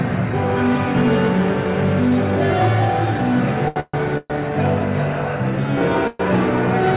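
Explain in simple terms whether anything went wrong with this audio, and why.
Yes, something went wrong, in two ways. First, there is a short stall from a late packet at 3.68 to 3.78 s. A piece of the audio arrived late. The receiver ran out of sound to play, so it stretched the last bit for about 80 ms. Then it picked up exactly where it left off. Nothing is lost, but one sound drags on a little too long and may buzz or dip slightly.

Next come three call audio freezes, at 3.80 to 3.95 s, 4.18 to 4.32 s, and 6.07 to 6.21 s. Each one is a pause of roughly 120 to 135 ms. The last sound turns into a fading buzz or hiss. In the first freeze it dies to about 40 ms of silence, and in the second to about 20 ms. The likely cause is audio held up on the network. When it arrives, playback carries on from the same place. So the sound is delayed rather than cut. Throughout the clip, the call line's narrow range means nothing is heard above 4 kHz.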